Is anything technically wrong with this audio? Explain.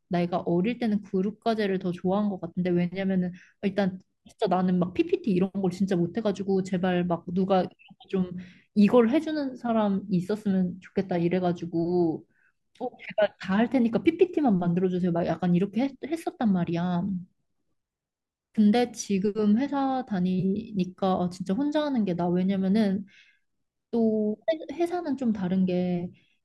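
Yes. At about 20.40 s, running to 20.45 s, there is a brief AAC frame loss with concealment in the speech. Roughly 30 ms of coded audio went missing, which fits three short frames of about 10 ms each, as a low-delay AAC stream would likely use. The decoder bridged the gap by reusing the last good spectrum with randomized phase, so the sound turns momentarily smeared and noisy. On a spectrogram, harmonic lines blur into a short vertical noise patch; the waveform shows a small irregular stretch.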